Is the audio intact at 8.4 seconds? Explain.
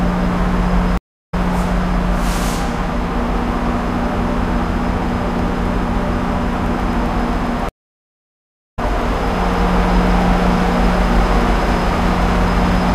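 No. At 8.4 s the stream connection has dropped, and the player is reconnecting and starting a fresh decoder mid-stream. This stream reconnect leaves a silence from 7.69 to 8.79 s, about 1.09 s. The sound then resumes roughly 0.7 s further along, so that stretch is skipped.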